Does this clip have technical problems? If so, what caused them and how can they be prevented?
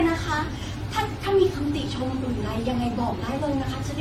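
Yes. Throughout the speech there is generation loss: the sound is swirly, smeared and hollow, consonant attacks blur, and nothing is present above 16.6 kHz. The likely cause is repeated lossy re-encoding, around half a dozen passes, with the character pointing to AAC at roughly 64 kbit/s. Each pass quantises on a shifted frame grid, so holes and noise accumulate. That sets it apart from a single low-bitrate encode, which band-limits but doesn't smear this much. To prevent it, keep a lossless master and encode only once, at the final step.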